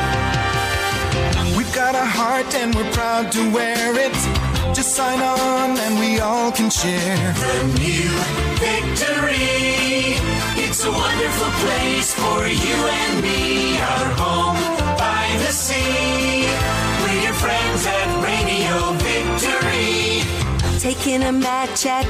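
No technical faults can be heard anywhere in this audio.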